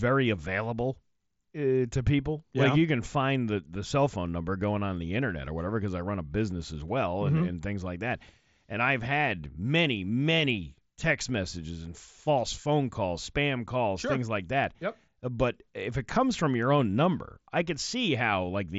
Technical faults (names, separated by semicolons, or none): none